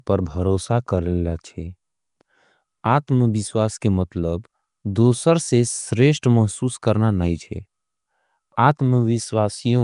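Throughout, the speech shows the likely marks of Nellymoser compression: coarse fixed-rate block coding, consistent with about 44 kbps, fills starved bands with noise, leaving a rough, hissy, underwater smear and nothing above 10.6 kHz. At 3.07 s there is pre-echo: a sharp onset late in a transform block spreads quantisation noise backwards, so a brief hiss of about 10 ms precedes a softened attack.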